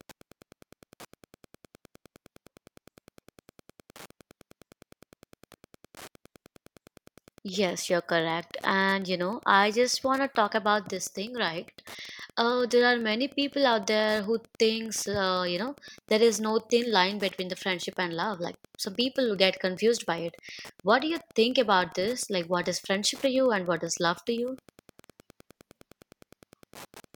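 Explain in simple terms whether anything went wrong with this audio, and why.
Wi-Fi interference runs throughout: a nearby Wi-Fi radio's regular signal leaks into the audio circuit, leaving a faint tick about ten times a second beneath the speech.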